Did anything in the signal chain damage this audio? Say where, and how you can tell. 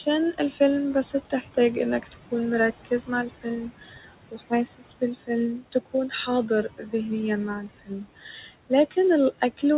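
Yes, in the call-processing stage. Noise suppressor artifacts run through the whole clip. The room noise sits about 16 dB under the speech. Between phrases it is pulled down by about 17 dB, then lets back up under the speech. On a spectrogram the gaps between phrases turn nearly empty. The noise floor pumps in step with the speech, all below the 4 kHz ceiling of the G.711 call path.

The same suppressor causes speech cut by the noise suppressor at 1.13–2.32, 2.85–3.46, 3.79–6.12, 6.49–6.93 and 7.67–8.97 s. Quiet consonants and word endings sound swallowed, dropped by about 11 to 17 dB. The largest loss, roughly 0.7 s, falls in the 3.79–6.12 s stretch. The waveform shows word tails collapsing, and the spectrogram shows faint fricative energy erased along with the noise.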